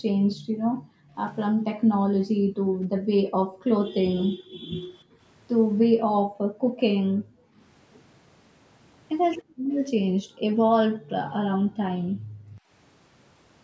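Speech recorded through a call's microphone processing, with nothing above 8 kHz. The faults are background gated by the echo canceller over 0.0–5.21 s, 5.85–7.58 s and 9.43–12.69 s, where the room sound is pulled down hard, by as much as about 40 dB, while the far end plays. At 4.97–5.02 s a very faint repeat of the speech, roughly 40 dB down and trailing by 292 ms, is likely an echo leak: the canceller let some loudspeaker pickup through.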